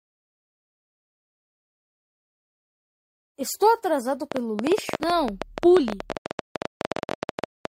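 From 4.32 s to 7.66 s a train of clicks rides over the sound: around forty sharp pops at about 12.6 per second, unevenly spaced, peaking roughly 15 dB above the audio. The likely cause is interference or a faulty connection or power supply. On a waveform they show as tall, thin spikes, and on a spectrogram as full-height vertical lines.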